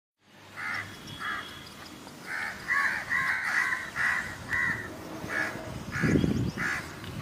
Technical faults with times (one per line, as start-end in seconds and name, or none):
3.34-3.45 AAC frame loss with concealment
5.60-5.66 AAC frame loss with concealment